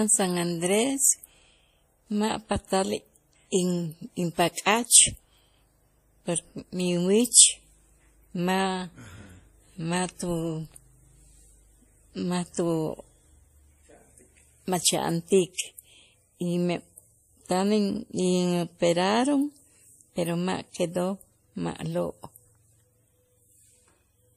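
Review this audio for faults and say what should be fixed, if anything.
Transcoding between lossy codecs runs throughout the clip. The speech carries two layers of coding damage at once, and nothing remains above 15 kHz. The sound points to a low-rate MP3 stage around 40 kbit/s, likely re-encoded as WMA at about 64 kbit/s. The second encoder spent its bits reproducing the first one's artefacts while adding its own, so the higher rate recovers nothing. Prevent it by encoding once, from the original uncompressed source, straight to the final format.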